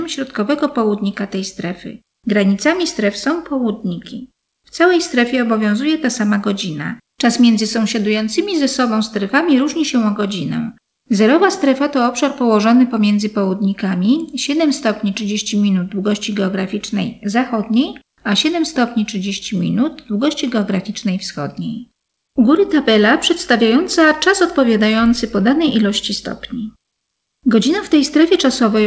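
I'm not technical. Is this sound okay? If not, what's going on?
Yes, nothing here sounds wrong.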